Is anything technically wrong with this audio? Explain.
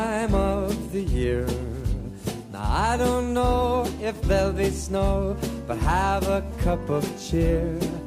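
No, no technical faults are audible.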